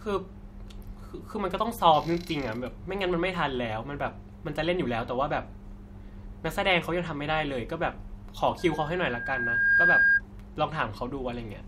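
Speech, with a loudspeaker feedback squeal from 8.58 to 10.22 s: a pure tone near 1.6 kHz swells over about a second to roughly 10 dB above the speech. The microphone is re-amplifying its own loudspeaker, with loop gain exceeding unity at that frequency.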